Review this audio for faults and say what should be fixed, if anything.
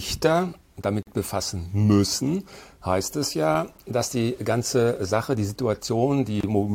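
Two gaps at a join of encoded pieces break the sound at 1.03–1.07 s (about 44 ms) and 6.41–6.43 s (about 29 ms): encoder start delay and last-frame padding were left in, showing as flat-line waveform dropouts and thin vertical blank strips. Trim encoder delay and padding before joining.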